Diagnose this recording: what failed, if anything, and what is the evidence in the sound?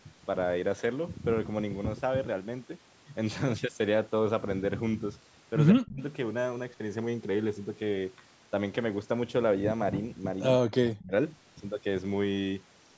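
In call processing, speech cuts away deeply at 5.73–6.01 s and 10.68–11.12 s. Likely speech suppressed in double talk, ducked by the echo canceller.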